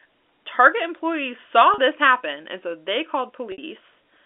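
Packet loss with pitch repetition occurs twice: 40 ms at 1.74 s, after "employees saw", and 60 ms at 3.52 s, after "happen and so they". The receiver filled each gap by repeating the last pitch period, so the sound briefly holds on a buzzy, frozen tone.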